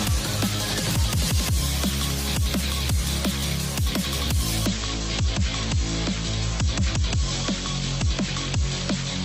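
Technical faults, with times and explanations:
4.66–9.25 s, adaptive stream at a lower bitrate: quality drops abruptly without a gap, treble vanishes above about 8.1 kHz and codec artefacts increase, consistent with a bandwidth-driven switch to a much lower AAC bitrate.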